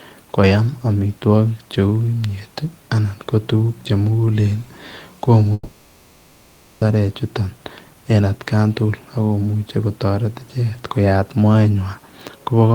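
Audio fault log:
5.53 to 6.83 s: long network dropout, likely. The last sound stretches into a fading buzz for about 1.3 s, then briefly goes silent. The speech in the gap is lost.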